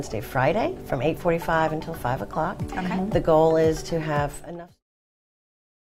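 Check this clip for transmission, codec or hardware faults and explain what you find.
No transmission, codec or hardware faults turn up here, and the smooth fade out that ends at 4.84 s is an ordinary edit.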